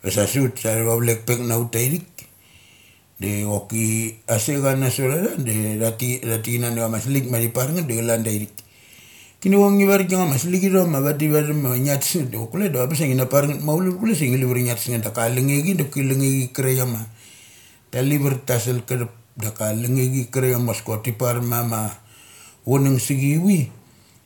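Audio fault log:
No fault is heard anywhere in the speech. There is nothing to log.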